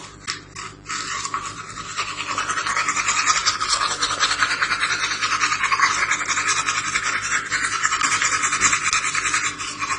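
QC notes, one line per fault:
throughout: mains buzz, a steady raspy buzz about 25 dB below the sound, built from 50 Hz harmonics that switching spikes extend well into the kilohertz range.
throughout: transcoding between lossy codecs, nothing above 9.7 kHz, with artefacts from more than one codec layered together, likely a low-bitrate AAC stage followed by Opus.
8.60–8.74 s: sudden gain jump, sound and background noise step up together by 6 dB with no ramp, likely a digital gain change applied between samples.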